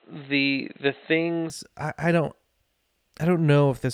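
From 0.0 to 1.5 s the speech sounds dull and boxy, with nothing above 4.1 kHz, and carries faint background noise well below the voice. At 1.5 s the sound clears, with no gap, and the level shifts by a few decibels. This is most likely an input switched to a poorer device, whose narrow band and own noise colour the opening. A spectrogram shows a flat ceiling near 4.1 kHz that lifts at 1.5 s, while the waveform shows a small step in amplitude there.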